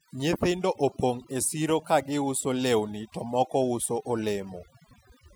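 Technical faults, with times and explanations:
Throughout: overdone noise removal. A noise reducer set far too strong gates individual frequency bands whenever they approach its noise estimate, taking soft speech detail with them, so the background drops and breaks up into twinkling, warbling specks. On a spectrogram, gaps show as black holes scattered with isolated bright specks.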